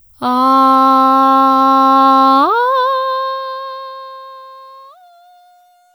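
A music excerpt fading out from about 2.4 s shows truncation distortion on the fade from 2.38 s: undithered steps turn the tail gritty from 4.21 s to 5.95 s, consistent with roughly 11-bit resolution.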